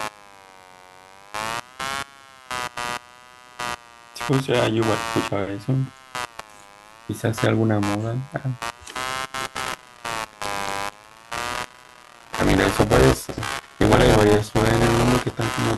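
From the start and running throughout, computer activity noise is present: load changes in the processor or graphics hardware are disturbing the shared ground of the audio circuit. The result is a buzzing, chirping texture pulsing at around 100 times a second, roughly 15 dB below the speech, that follows the machine's activity rather than the sound.

At 9.44 s buffer tearing begins and continues to the end. The writing and reading positions in the ring buffer have drifted until they cross inside every period, so about a fifth of each buffer carries audio from around 10 ms earlier, spliced in with hard joins. This produces a robotic 200 Hz buzz riding on the speech, present only while there is signal.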